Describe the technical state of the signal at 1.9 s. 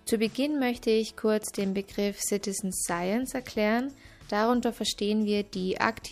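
The signal at 1.9 s is intact, with no dropout, distortion or other fault present at that moment.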